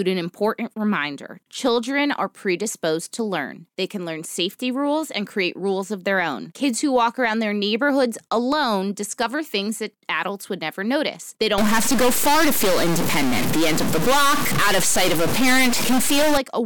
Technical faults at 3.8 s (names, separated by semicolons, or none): none